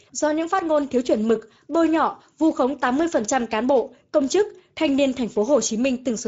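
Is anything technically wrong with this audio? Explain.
Yes. Throughout the speech, Speex codec damage is plainly audible: the sound points to a setting around 16.8 kbps, too few bits for CELP excitation, so voices turn hoarse and noisy, the upper band is thin noise fill, and nothing sounds above 7.7 kHz.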